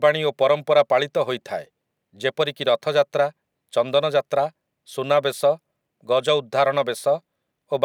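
No technical faults turn up anywhere in the recording. There is nothing to place on the timeline.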